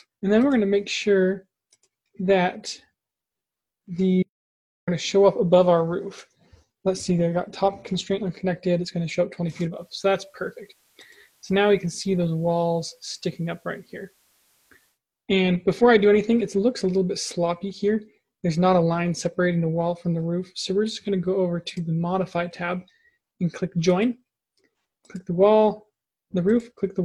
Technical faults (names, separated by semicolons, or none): audio dropout to silence; digital radio blending to analogue